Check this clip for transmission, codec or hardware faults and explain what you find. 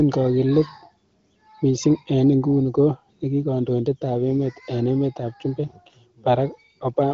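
No transmission, codec or hardware faults.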